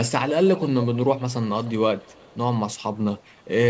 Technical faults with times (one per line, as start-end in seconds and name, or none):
0.29-1.33 echo leak
1.63-1.72 echo leak
1.98-2.37 echo leak